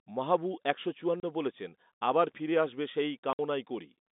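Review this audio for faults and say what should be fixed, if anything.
Packet loss filled with silence leaves a 30 ms hole at 1.20 s, after "মাহবু একশো", and a 60 ms hole at 3.33 s, after "আবার ফিরে আসবে সেই". This fits one and two lost 30 ms packets, with hard edges. Receiver-side packet loss concealment or forward error correction would prevent it.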